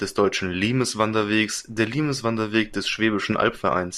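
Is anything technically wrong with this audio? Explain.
Yes. From 3.30 to 3.42 s the speech is hit by DAB burbling. Under weak reception, a bit error rate of a small fraction of a percent slips past the error correction into the MP2 data. Corrupted samples put short blips of noise in single sub-bands, and corrupted scale factors make sub-bands jump in level for up to a frame, consistent with about seven damaged frames. Unlike a packet-loss dropout, the sound never goes silent; bands flare erratically instead.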